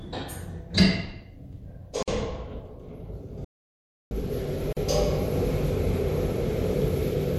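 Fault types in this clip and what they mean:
Gap at a join of encoded pieces: separately encoded segments were butted together with their encoder start delay and final-frame padding left in, so brief silences of about 50 ms at 2.03 s and 41 ms at 4.73 s cut into continuous sound, which then resumes where it stopped. On a waveform they are narrow flat gaps, and on a spectrogram thin vertical blank strips with slightly smeared edges.
Audio dropout to silence: the sound cuts out abruptly from 3.45 s to 4.11 s, about 660 ms of silence with no room tone, and whatever sounded in that span is lost. This is likely from the input signal being lost while recording carried on. A waveform shows a dead flat line, and a spectrogram a fully empty block with hard vertical edges.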